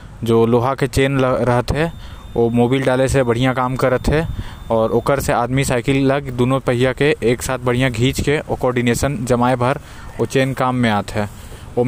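From 1.73 to 5.09 s, a switching supply whistle sits around 35 dB under the speech, a faint tone drifting between 3.57 and 3.61 kHz, drawn as a thin wavering spectrogram line.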